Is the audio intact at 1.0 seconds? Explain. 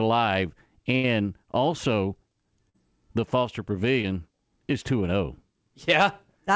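No. From about 0.96 to 1.05 s the speech stops moving forward: the last sound is stretched into a held, fading sound and then cuts to later speech, so roughly 80 ms is skipped. This is a burst of packet loss. Several packets in a row never arrived in time to be played, and the receiver filled about 74 ms by repeating and turning down the final sound it had before picking up again further along.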